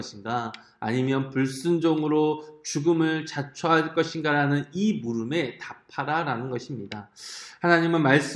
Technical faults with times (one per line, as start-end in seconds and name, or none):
none